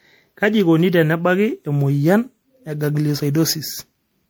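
Generation loss runs through the whole speech clip, most likely from the audio being decoded and re-encoded as MP3 around seven times, with the character pointing to a rate near 96 kbit/s. Each pass quantises the signal again on a shifted frame grid, so errors stack instead of settling. The result is a swirly, hollow tone with gaps in the spectrum, a smeared texture, and consonant attacks that lose their edge, sounding worse than a single encode at that rate would.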